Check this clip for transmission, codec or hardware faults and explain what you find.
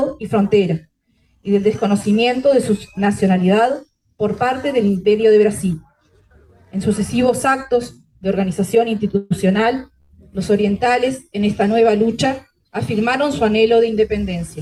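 Two transmission faults sit close together, both in the second half of the clip.

From 9.17 to 9.32 s there's a call audio freeze. The last bit of sound gets carried on as a fading buzzy continuation for about 136 ms rather than dropping to silence, and then the audio picks up exactly where it left off. That's most likely packets held up in the network until the jitter buffer ran dry, with the receiver filling the wait. Nothing seems to be lost; the audio just runs that much later afterwards.

Then at 10.00 to 10.11 s comes a short stall from a late packet. One sound is held too long, about 84 ms, with a slight buzzy sag to it. A single packet missed its slot, the buffer emptied, and the receiver stretched what it already had until the packet showed up, then carried on from the same point. Again nothing's skipped; you just get a small added delay and that smeared, held moment.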